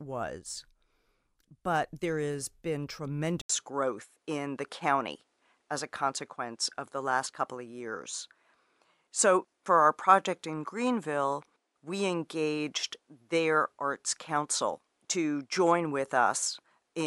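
At 3.41 s, just after "there has been", the speech drops out for about 80 ms and returns sounding duller, and it stays that way to the end. This is likely an input switched to a poorer device, which passes a narrower band. On a spectrogram the energy stops sharply at 11.4 kHz from the switch onward, with a fresh noise floor appearing roughly 50 dB down. The waveform shows the brief gap and a level step of around 5 dB.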